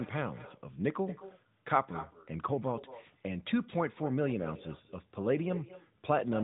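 From start to finish the speech carries an echo with no canceller. At the far end a loudspeaker feeds the microphone and nothing subtracts that pickup, so each phrase returns about a fifth of a second later, around 15 dB quieter and thinner. On the waveform every burst has a smaller trailing copy; on the spectrogram each syllable is shadowed by a fainter duplicate shifted right, all confined below 3.8 kHz by the narrowband AMR mobile codec.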